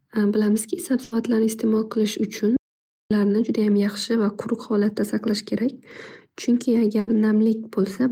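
A burst of packet loss at 1.03 to 1.14 s interrupts the speech. A short run of packets never arrived in time, so the receiver kept extending the last sound it had for about 80 ms, fading it down as the gap went on. The result is a brief held buzz or fading hiss. When the speech picks up again, about 80 ms of it has been skipped.

An audio dropout to silence follows at 2.57 to 3.11 s. The speech cuts off abruptly into silence with no room tone at all, and then returns mid-flow. About 540 ms of audio is lost. The likely cause is that the input stopped delivering signal, through a disconnection, a failed link or an accidental mute, while the recorder kept writing silence.

A second burst of packet loss at 6.99 to 7.10 s repeats the first: about 80 ms of concealment fading out, then speech resuming with about 80 ms missing.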